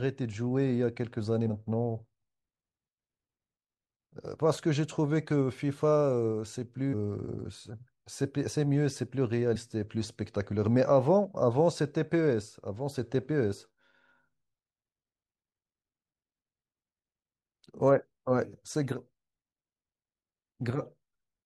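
At 1.49 s, and again from 9.55 to 9.57 s, the speech lurches forward with compressed frames skipped. A few whole frames never reached the output, so about a tenth of a second of speech is simply missing. The jump fits a whole number of roughly 23 ms frames. Unlike a dropout, no silence or gap is heard.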